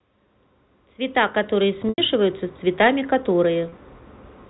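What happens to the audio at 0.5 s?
At 0.5 s the speech is intact, carried through G.711 telephone coding with its usual 4 kHz ceiling and nothing going wrong at that point.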